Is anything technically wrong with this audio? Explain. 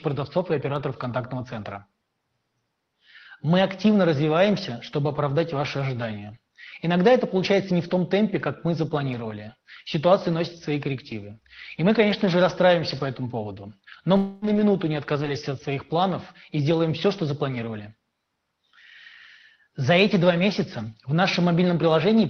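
Yes. There are two kinds of fault, both right after 14 s.

Long network dropout, 14.17 to 14.45 s: the likely cause is that the stream stopped arriving for about a quarter of a second. The receiver covered the hole by stretching the last sound it had into a fading, buzzy or hissy fill lasting about 251 ms, with no stretch of true silence. When the audio resumes, roughly 240 ms of the original material is missing, so the sound jumps forward rather than continuing where it left off.

Lost packet rebuilt from error correction, at 14.42 to 14.48 s, 14.55 to 14.61 s and 15.21 to 15.27 s: individual packets went missing, but each following packet carried a low-bitrate backup copy (Opus in-band forward error correction), and the decoder played that copy instead. There is no gap at these points. Each 60 ms patch is rougher and noisier than the material around it.

All of this passed through an Opus call path. 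The audio tops out around 6 kHz, which fits a bitrate of about 20 kbps.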